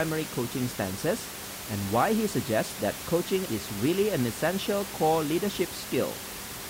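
No technical faults are audible in the speech; the only background is ordinary room noise sitting about 10 dB below the talker, which belongs to the recording space rather than the signal chain.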